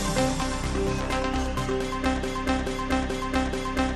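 From 2.23 s to the end, the sound gets stuck in a broken-record loop: a 0.43 s fragment repeats exactly, back to back, four times. Most likely the player or stream stalled and kept resending its last chunk, so whatever should have followed never arrives.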